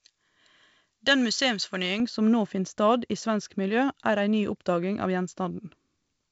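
From 0.0 to 2.0 s, just before "som nå finn stad", pre-emphasis was left on. The treble boost (a J.17-style curve, about 11 dB at 10 kHz) was never undone, so the speech sounds thin, bright and hissy. A spectrogram shows the upper band glowing hot up to the G.722 wideband ceiling near 7.7 kHz.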